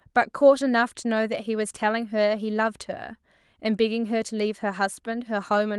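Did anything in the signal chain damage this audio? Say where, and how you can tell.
No, nothing in the chain damaged this speech: it arrived over a call path through the Opus codec, whose 12 kHz band limit is expected for that setting, and no stage shows anything wrong.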